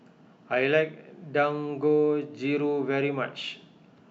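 From 3.39 to 3.54 s the speech is broken by a decoding error, peaking at about -31 dBFS, before clean audio resumes. This is a corrupt FLAC frame: flipped bits went undetected because the checksum was not verified, so the decoder's prediction ran on wrong values from the damaged point onward. The 0.15 s span suggests the damage ran across two consecutive frames before an intact one restored normal decoding.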